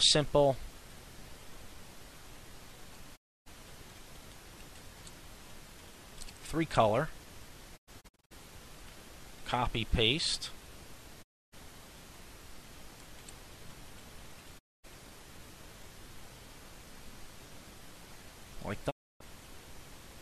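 A digital broadcast dropout recurs five times. The receiver lost good frames and muted until clean data returned. Each gap opens with a quick 20 ms fade to silence. The first runs from 3.15 to 3.48 s, about 0.29 s lost. At 7.76 to 8.33 s, the muting breaks into several short holes, the longest 96 ms. Further gaps fall at 11.21 to 11.54 s, 14.57 to 14.85 s and 18.89 to 19.22 s. The audio inside each hole is gone.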